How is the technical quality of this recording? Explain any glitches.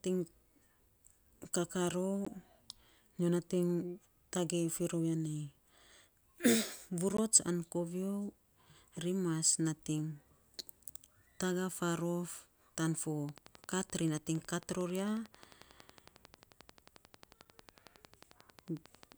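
The recording has two kinds of fault: two brief dropouts early on and a sustained click train near the end.

Block of digital silence, at 2.25 s and again at 7.17 s: each time, about 15 ms of samples are zeroed, consistent with the output buffer not being filled in time. The speech cuts abruptly to silence and back with no fade. At this length the result is a tick or a brief dip rather than an audible gap.

Train of clicks, from 13.29 s to 19.13 s: a regular series of near-identical pulses at 11.2 per second, roughly seventy in all. They peak slightly above the speech level, so they sit clearly on top of the voice and stay audible in the pauses as a steady ticking. The even spacing and uniform shape point to a likely cause in interference from nearby equipment or a faulty connection or power supply.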